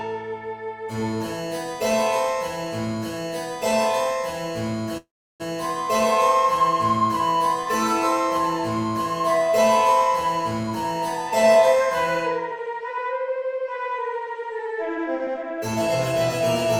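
From 4.97 to 5.42 s the sound briefly carries on as a fading buzz, then drops to near silence for about 340 ms before resuming exactly where it stopped. This call audio freeze likely came from delayed packets emptying the jitter buffer, inserting a 423 ms gap.

Between 11.3 and 15.77 s the audio runs noticeably hurried, about 107% speed with pitch unchanged. This jitter buffer speed-up trimmed tiny pitch-period slices repeatedly, removing roughly 0.3 s in total, to shrink the excess delay.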